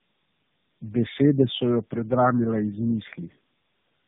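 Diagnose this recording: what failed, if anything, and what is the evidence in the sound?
Tandem speech coding affects the whole clip, a codec-stage fault. The speech sounds rough, muffled and warbly, with nothing above 3.7 kHz. This fits three passes through a low-rate narrowband coder such as AMR-NB, each re-encoding the previous pass's degraded output.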